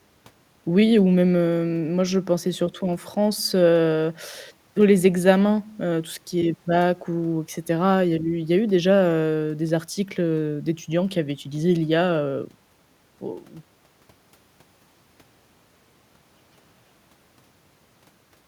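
No technical faults can be heard anywhere in the recording; the speech signal stays continuous and intact throughout, with no interruptions, level disturbances or added artefacts.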